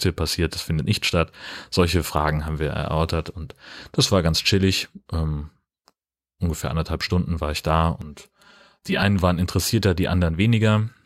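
From 8.02 to 9.02 s, after "war ich da" and before "waren interessierter", the speech turns hollow and phasey. This is channel delay (comb filtering). One channel runs about 5 ms late, and summing to mono cuts evenly spaced notches, the first near 100 Hz.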